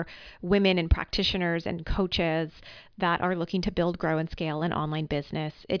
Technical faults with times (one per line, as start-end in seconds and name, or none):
none